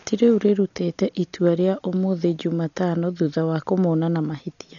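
Throughout the speech, the sound is dull, with nothing above about 6.9 kHz, and a rough, fluttering noise clings to voiced tones. This is likely heavy Dolby Digital compression, which fits a very low bitrate of around 40 kbps: bare frequency lines are filled with dither noise rather than left as MP3-style swirling holes.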